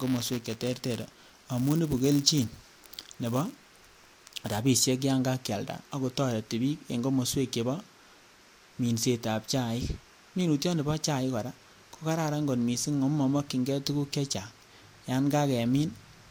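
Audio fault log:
0.00–4.61 s, buffer tearing: a steady robotic buzz at 172 Hz rides on the speech, which fits a 256-sample buffer. Writer and reader have slipped and cross each period, so a small sliver of each buffer holds audio from about 10 ms earlier, with hard joins on both sides.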